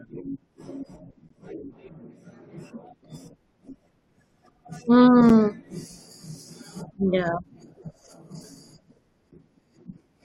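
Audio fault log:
1.29 s, 5.29 s, 9.31 s: gap between stream segments. Brief hard-edged silences of about 8 to 16 ms recur every 4 seconds, fitting segment boundaries. The silence is inserted rather than replacing audio, so nothing is lost, unlike a dropout.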